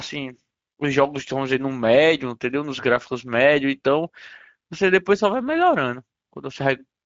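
From start to finish the speech sounds noisy and hoarse, with nothing above 7.7 kHz. That is Speex codec damage: this CELP coder has few bits for the excitation signal, which fits a Speex mode near 17 kbps.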